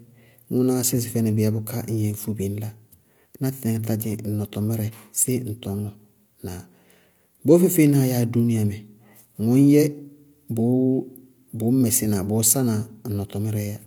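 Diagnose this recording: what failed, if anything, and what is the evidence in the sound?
Nothing in the signal chain has failed: the speech arrives intact and continuous, with no audible defect at any stage from capture to playback.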